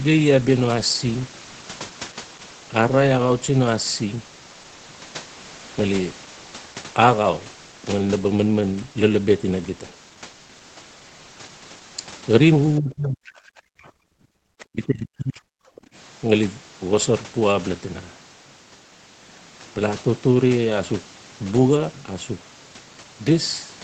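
From 12.79 to 13.47 s and again from 14.45 to 15.55 s, the speech drops by roughly 40 dB, likely speech suppressed in double talk; unlike a network dropout, it follows the other side's activity. At 15.76 to 15.87 s a faint second voice, about 30 dB under the speech, comes through, likely the other side's voice leaking through from an incompletely cancelled loudspeaker. Overlapping its end, from 15.83 to 15.92 s, the room tone briefly dips by about 12 dB: background gated by the echo canceller, a quick hold on the microphone rather than suppression of the talker.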